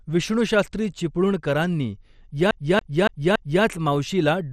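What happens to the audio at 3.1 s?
A CD stuck on one turn makes the laser jump back once per disc rotation from 2.51 to 3.64 s. The same 0.28 s slice repeats four times, each jump marked by a brief mute, producing a fast, even stutter.

The signal also likely went through MP2 compression at a low rate, around 64 kbps. Bits were withheld from the upper sub-bands, so nothing remains above 15 kHz and a dull, gurgling, granular roughness is plainly audible.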